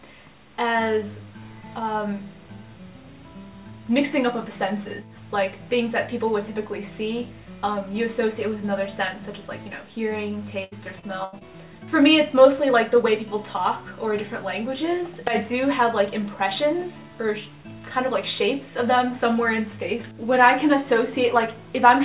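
Audio from a call path, with nothing above 4 kHz, which fits G.711 A-law. From 10.64 to 11.43 s there is repeated packet loss, giving a robotic sound. Several short dropouts, the longest 79 ms, are patched by stretching the last sound, so about a quarter of that stretch sounds choppy.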